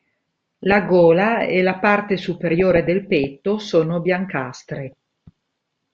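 From 2.39 to 3.24 s, just after "e la parte", the speech breaks into DAB burbling: weak reception lets a fraction of a percent of bit errors through into the MP2 data, so wrong samples put short blips of noise into individual sub-bands. A spectrogram shows scattered rectangular blocks popping in and out across separate frequency bands.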